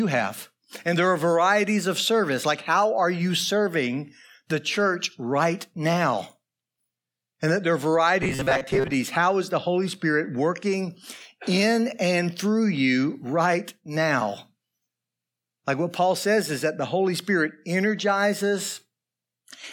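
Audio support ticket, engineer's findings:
Rigid metallic buzz at about 133 Hz, 8.23–8.95 s. Robotic sound from repeated short buffers, likely from audio arriving late. A roughly 7.5 ms chunk is replayed, filling about half the audio.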